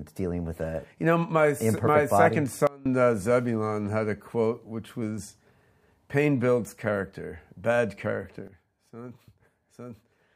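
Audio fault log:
2.67–2.86 s and 8.48 s to the end: sudden gain jump. A digital gain change was likely applied from one sample to the next with no ramp, first cutting level by about 23 dB for a brief 0.19 s, then by about 12 dB for the final 1.9 s. Because the step is scaled onto the whole signal at once, sound and background drop together abruptly rather than fading, so the level appears to switch down instantly, recovering only after the first dip.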